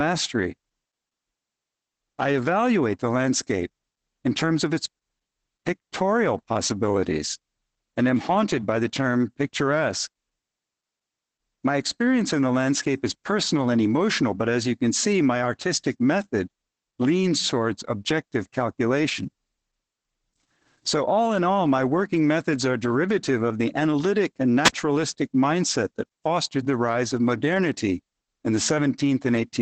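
Speech throughout, carrying plainly audible Opus voice compression: the linear-prediction SILK coder is reconstructing the voice from a coarse excitation, giving a muffled, hoarse, slightly robotic quality. The limited top end and texture point to wideband operation at roughly 12 kbps. From 24.64 to 24.73 s, just after "of the analytic and", a wireless microphone squelch dropout occurs. The receiver's squelch closes when the analogue FM radio signal fades, muting the output for about 45 ms before the voice returns.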